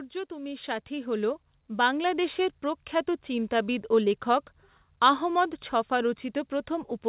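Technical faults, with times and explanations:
0.28–2.45 s, automatic gain rising: the level climbs steadily by about 9 dB over roughly two seconds, with the speech and the background noise swelling together rather than the voice alone getting louder. That shared rise shows a gain control reacting to an input it judged too quiet and turning itself up gradually. It settles by the time "প্রখ্যাত চিন্তাবিদ ও লেখক" begins, and the speech remains narrowband with nothing above 4 kHz, which fits a G.711 call path.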